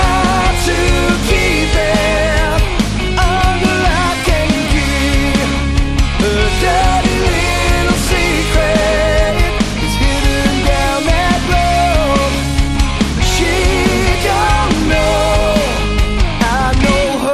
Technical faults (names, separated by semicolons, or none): none